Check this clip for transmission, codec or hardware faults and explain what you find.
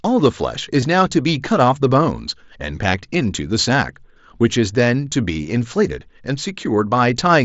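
Three brief dropouts are filled in rather than left silent, at 0.81 s, 2.93 s and 5.33 s: concealed Bluetooth headset packet loss on the mSBC headset link, whose 8 kHz speech band is audible throughout. At 0.81 s about 15 ms is missing, which fits two lost packets. The other two gaps are 7.5 ms each, one packet apiece. Each gap is patched by repeating a matching stretch of recent waveform, so the single-packet gaps are nearly hidden and none leaves a silent hole.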